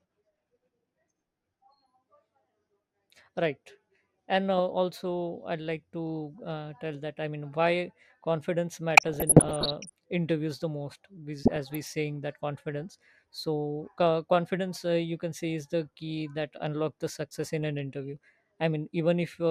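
At 8.94 s the speech picks up DAB burbling that runs to 9.90 s, then comes back from 11.38 to 11.91 s. Reception was weak enough that bit errors, somewhere under one percent, slipped past error correction into the MP2 data, turning wrong samples into noise blips in single sub-bands and making individual sub-bands jump in level for up to a frame where scale factors were hit. You hear it as short blips of noise over the speech. The first burst sounds like a few dozen damaged frames, the second about half that.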